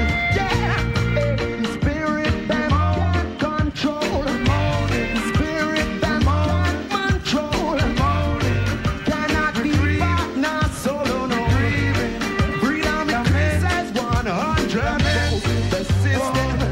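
De-emphasis applied wrongly, from 1.30 to 3.85 s: a treble-cut curve designed to reverse pre-emphasis lands on audio that never carried that boost, or was already corrected once. The high end rolls off gradually rather than at a sharp corner, sitting about 8 dB down at 10 kHz relative to 1 kHz. Across this stretch the sound turns dull and muffled, losing its air and crispness before brightness returns after 3.85 s.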